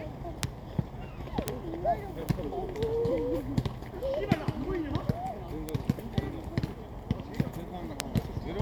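Bit error spikes at 0.43, 1.48, 2.29, 5.69 and 8.00 s: single flipped bits briefly jump the waveform to about -6 or -12 dBFS, each a sharp broadband tick.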